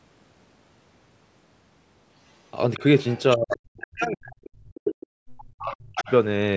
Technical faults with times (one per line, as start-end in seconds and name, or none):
2.74-3.87 other side's voice leaking through
3.36-5.03 speech suppressed in double talk
4.44-5.07 other side's voice leaking through
5.38-6.12 other side's voice leaking through
5.58-6.10 speech suppressed in double talk